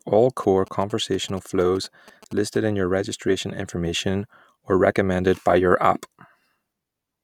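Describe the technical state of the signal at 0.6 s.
GSM signalling bursts, 0.43 to 2.57 s: the audio circuit rectifies a nearby 2G phone's radio pulses into a galloping dit-dit-dit of short 217 Hz buzzes, well below the speech.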